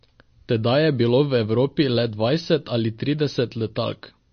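The speech here has likely been through heavy MP3 compression, at a data rate low enough to fit something around 32 kbps. Starved of bits, the encoder has cut the treble off completely, leaving nothing above 6.5 kHz, and has dropped quieter frequency detail that flickers in and out from frame to frame. From start to finish the damage is plainly audible: the sound is dull and watery, sibilants turn swirly and metallic, and consonant attacks smear.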